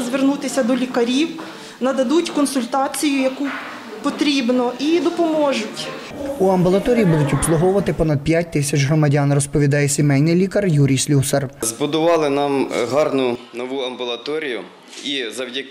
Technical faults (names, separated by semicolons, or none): input switched to a poorer device